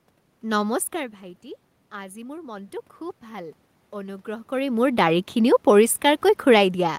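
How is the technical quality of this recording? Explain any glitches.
One glitch stands out in the speech. From 1.91 to 4.86 s there is automatic gain rising: after the input fell by about 15 dB, the gain control slowly added about 5 dB. Voice and room noise swell together, seen as a gradually widening waveform envelope and brightening spectrogram background.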